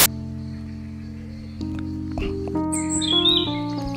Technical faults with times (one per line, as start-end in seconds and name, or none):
0.00-0.06 file tags played as audio